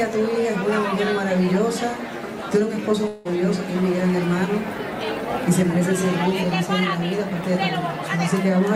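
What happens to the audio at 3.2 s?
A long network dropout runs from about 3.07 to 3.27 s, across the moment you asked about. For roughly 0.18 s the audio stops arriving, most likely because packets were lost in transit. The receiver covers the gap by stretching the last sound it had into a buzzy, hiss-like continuation that fades over about 0.17 s, with no fully silent stretch. The audio then resumes, but the section that was lost never plays.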